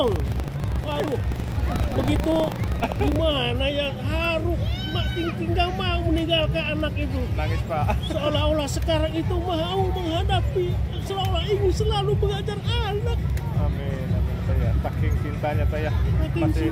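From the start to 3.19 s the sound carries buffer tearing: the writing program and the playback hardware have slipped out of step, so within each 40 ms period a small slice is replaced by audio from roughly 70 ms earlier. The hard joins produce a steady 25 Hz robotic rattle under the signal. On a spectrogram this shows as thin vertical streaks every 40 ms; the waveform shows abrupt discontinuities at the same spacing.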